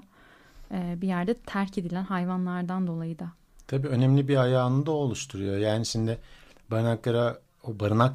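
No technical faults can be heard in this recording.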